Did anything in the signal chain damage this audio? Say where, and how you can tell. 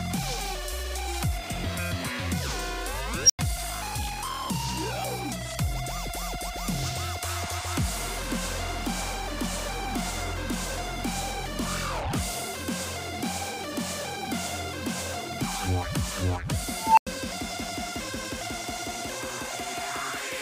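Yes, an unstable filter in the processing stage: at 3.25 s a tone near 5 kHz swells within 45 ms, and at 16.79 s one near 1 kHz swells over 188 ms. Each clips, then overflows into 93 ms of silence until the filter resets. Acoustic feedback would not cut to silence like that.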